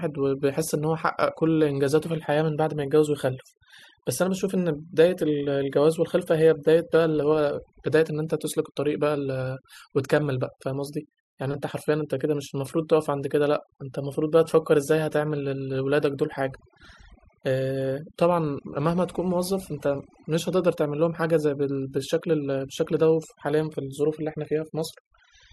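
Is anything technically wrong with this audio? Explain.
Yes. Throughout the speech, the recording shows overdone noise removal. A noise reduction process was pushed too hard on a noisy source. Any frequency band that sits close to the estimated noise floor gets pulled far down or gated off entirely, and the softer components of the voice are treated the same way. The background drops and breaks up into twinkling specks.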